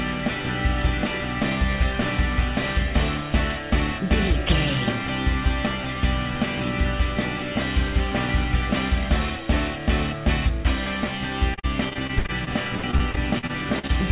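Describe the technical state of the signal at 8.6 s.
At 8.6 s the signal is intact, with no dropout, glitch or distortion, and it carries the narrow telephone-band sound and coding noise of the call path, which fits G.711 mu-law coding and leaves nothing above 4 kHz.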